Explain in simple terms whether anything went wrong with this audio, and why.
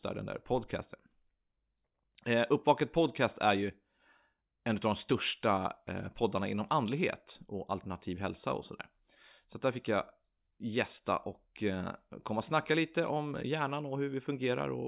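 Nothing went wrong with this audio: no fault can be heard anywhere in the speech, so there is nothing to explain.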